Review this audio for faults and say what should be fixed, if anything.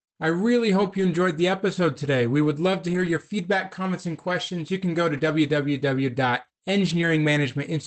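Lost packets rebuilt from error correction occur at 0.81–1.03 s after "I really", 2.89–3.11 s after "would love to", 5.17–5.19 s after "can go to", and 6.85–7.07 s. Each stretch sounds rough and noisy but has no gap. The decoder played low-bitrate copies carried in the next packets. The longer stretches each contain six separate lost packets. Reducing packet loss on the network path would prevent this.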